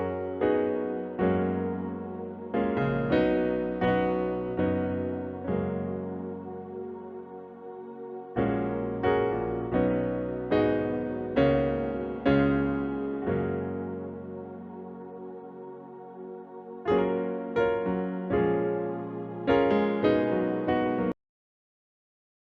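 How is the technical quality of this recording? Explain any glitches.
The recording has one fault, a cut-off end. At 21.12 s the sound stops mid-event. The final buffers were never written, so it drops straight to digital silence without any decay.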